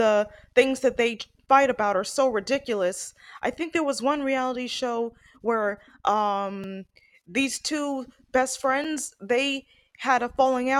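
At 6.64 s and again at 8.84 s, just after "these two best", there's a block of digital silence: the output briefly drops to zero, about 2.7 ms then 5.3 ms, which fits buffers of 128 and 256 samples not filled in time. Each lands as a tick or dip.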